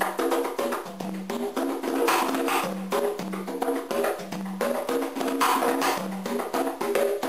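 No technical faults can be heard in this clip.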